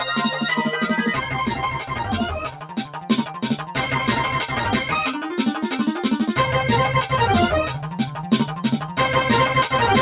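A noise suppressor applied to music or sounds runs throughout, treating sustained material as noise and swinging the level by around 10 dB, so held sound pumps and thins. The suppressor cuts sound at 1.84–2.05 s (down about 7 dB), 2.46–3.76 s (down about 12 dB, the longest and deepest dip) and 7.85–8.26 s (down about 7 dB), where steady passages and decays sink while transients survive. Through the call path, nothing is heard above 4 kHz, which fits G.711 A-law narrowband coding.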